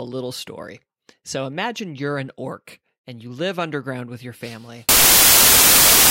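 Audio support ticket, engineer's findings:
Samples built from the wrong bytes, 4.89 s to end of clip. Speech abruptly replaced by loud, harsh noise, close to white on the louder passages. Probable component: PCM reader or format converter misassembling sample bytes (offset by one byte, swapped order or wrong alignment), so fast-changing low bits land in the high-order position. Unlike a hiss or noise-floor fault, it cuts in at a hard boundary.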